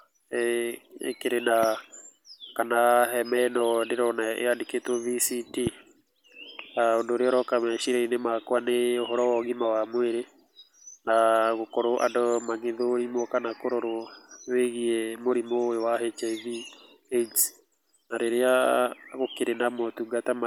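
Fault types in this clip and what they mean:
Loud pop: sharp single pops at 1.63 s and 5.67 s, well above the speech, which carries on underneath; likely a sudden voltage spike.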